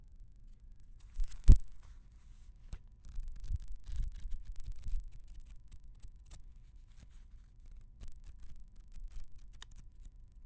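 Throughout, a resampler restarted on every block leaves an edge error every 40 ms, a 25 Hz buzz present only with sound, unlike dropouts, which leave gaps.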